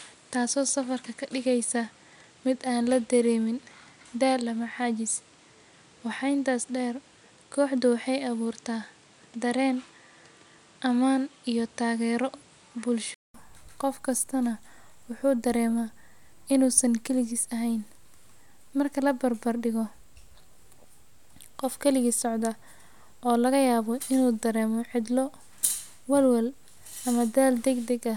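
From the start to 13.34 s the speech has nothing above 10.5 kHz and a noise floor roughly 35 dB down, consistent with an input switched to a poorer device, likely. At 13.34 s a 0.2 s silence precedes "qof kastana wuu dareemaa", where the band opens up at a similar level.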